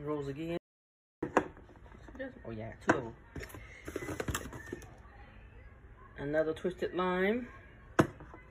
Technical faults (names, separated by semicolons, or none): audio dropout to silence